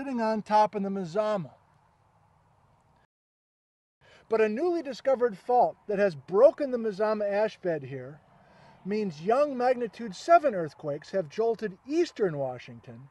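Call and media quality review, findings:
Rebuffering stall, 3.05 to 4.01 s: playback drops to silence for roughly 0.96 s, then resumes at the exact point it stopped. No content lost, time added. Player-side buffer underrun: downloaded audio exhausted, playout halted until more data arrived.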